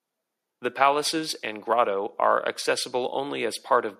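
Listening to the speech carefully, nothing technical stood out.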